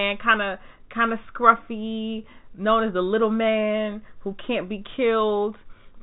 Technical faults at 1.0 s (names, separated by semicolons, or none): none